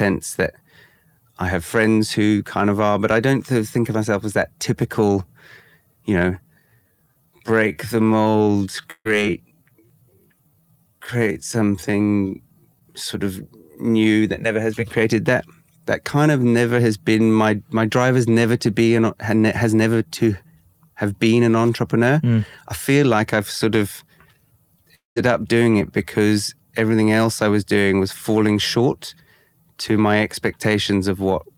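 From 6.38 to 13.01 s, right after "you know", a time-stretched section likely comes from software slowing the audio to about 0.65 times its speed while holding pitch by repeating short pieces. The pace drags abruptly while the pitch stays the same.

Inside that stretch, from 8.91 to 9.07 s, a burst of packet loss drops about 140 ms of audio. The receiver extends the last sound for roughly 137 ms as a fading buzz or hiss, leaving a brief silence before the speech resumes further on.

At 12.79 to 12.83 s, short concealed packet loss leaves a 20 ms hole, which the receiver patches by continuing the preceding sound and blending back. It registers as a quick smear or wobble, and a brief consonant may vanish.

From 24.95 to 25.18 s, just before "up doing it because", a long network dropout likely leaves about 220 ms unplayed. A continuation of the last sound fades over roughly 210 ms into quiet, and the speech returns with that stretch missing.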